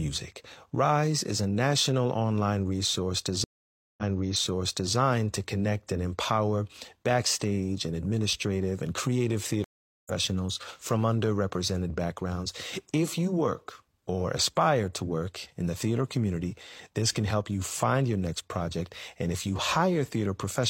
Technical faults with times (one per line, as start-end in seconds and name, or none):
3.44-4.95 stream reconnect
9.64-10.12 stream reconnect